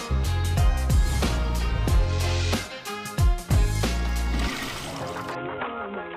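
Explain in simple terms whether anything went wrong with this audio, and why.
Near the end, from about 5.35 s to the close, a Bluetooth SBC bit pool drop occurs. The wireless link got crowded, so the sender squeezed the audio into far less data. The highs go dull and a gritty, grainy noise appears.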